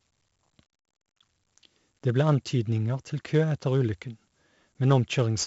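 4-bit ADPCM compression affects the speech for the whole clip. Each sample is coded as a small 4-bit step from a predicted value, and the step size adapts as the signal changes. The damage is heavy. A gritty hiss rides on every loud syllable and rises and falls with the level. Sharp onsets sound rough because the step cannot grow fast enough. Nothing is present above 7.7 kHz, which dulls the top end and fits a 64 kbps stream.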